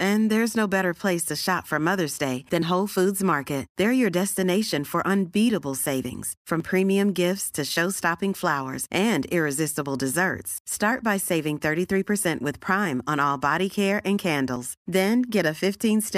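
Audio missing between chunks skips this speech at 2.62, 6.60, 10.58 and 14.56 s. Each time about 20 ms vanishes and the two sides join with no gap. The even spacing likely comes from processing in 4-second chunks that drops audio at each handover.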